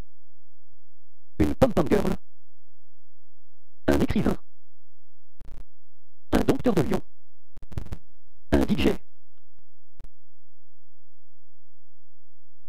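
From start to finish there is a block size mismatch (truncated): one stage writes longer blocks than the next reads, fitting a 512-sample block, so each block's tail is discarded. A steady 138 Hz buzz results, and the audio runs 1.6 times fast at about normal pitch, unlike a sample-rate error, which shifts pitch too.

Digital broadcast dropouts follow at 5.41 to 5.61 s (several short holes, the longest 48 ms), 7.57 to 7.64 s and 10.0 to 10.05 s. The receiver mutes with quick 20 ms fades into silence, rather than smearing or repeating audio as concealment would, and the missing sound never returns.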